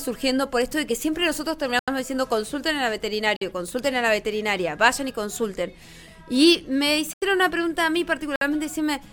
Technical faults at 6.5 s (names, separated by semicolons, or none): none